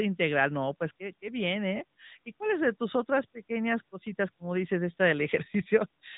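Speech, narrowband throughout, with AMR narrowband mobile codec damage that is plainly audible. Nothing passes above about 3.8 kHz, leaving the voice dull and telephone-like. The codec rebuilds each 20 ms frame from a vocal-tract model excited by a few pulses per subframe, so the voice takes on a buzzy, synthetic edge. The degree of coarseness points to a mid-rate mode, which fits roughly 10.2 kbps.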